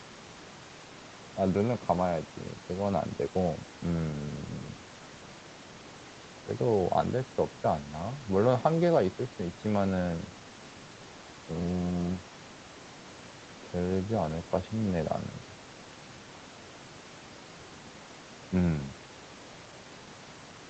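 Nothing in this speech recording points to a technical fault.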